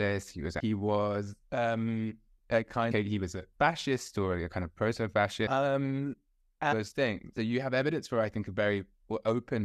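Short chirps, squawks, clicks or holes cut into the speech five times: at 0.58 to 0.61 s, between "he was" and "was um a"; at 2.90 to 2.93 s, just after "was um a"; at 5.46 s; at 6.71 to 6.73 s; and at 7.36 s. Each lasts barely 14 to 24 ms. These come from damaged data in a compressed stream. Corrupted bytes make the decoder misread those frames and lose sync until it finds the next valid frame header.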